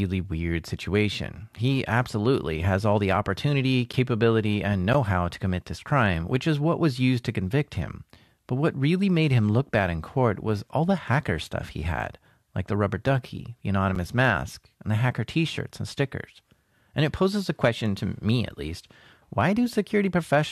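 Gaps between stream segments occur in this speech at 3.93, 4.93 and 13.95 s, brief hard-edged silences of about 9, 11 and 9 ms. Segment timestamps don't quite meet at 1.0 s boundaries, so the player inserts silence rather than losing audio.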